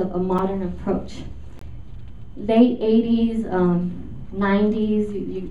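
At 0.38 s, a block of digital silence cuts in for 5.8 ms, which fits a 256-sample block left unfilled. The abrupt edges make it a tick. At 1.59 to 1.61 s, a longer 22 ms gap sounds like a short hole.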